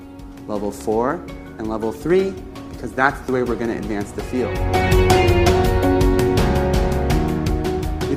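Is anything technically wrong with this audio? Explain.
Yes. An adaptive stream at a lower bitrate runs from 1.34 to 5.34 s: the player switched to a leaner encoding while the connection slowed. Quality changes suddenly with no gap, and artefacts increase, consistent with a drop from roughly 64 to 24 kbit/s Opus.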